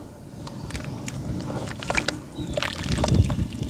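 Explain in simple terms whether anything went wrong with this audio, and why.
Nothing went wrong here; no faults can be heard.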